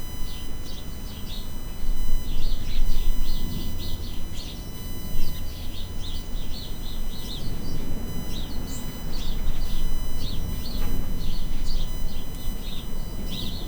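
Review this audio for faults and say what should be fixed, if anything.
USB whine runs throughout: current drawn by the USB bus in 1 ms frames leaks into the audio through power or ground, adding a fixed-pitch tone at 1 kHz and its multiples, strongest at 21 kHz, roughly 25 dB below the sound. Powering the interface from a clean separate supply, or adding a USB isolator to break the shared ground, would prevent it.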